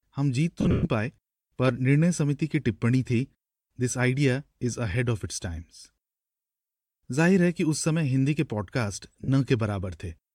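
A speech recording with two bursts of lost LE Audio frames. From 0.61 to 0.85 s, about 190 ms of audio drops out in pieces, the longest gap about a tenth of a second, and the LC3 decoder fills each gap with a noisy smear that fades in the longer gaps. A shorter 40 ms loss follows at 9.24 s.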